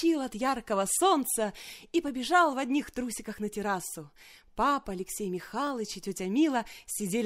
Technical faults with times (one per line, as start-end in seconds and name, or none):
0.89-6.87 clock drift buffer slips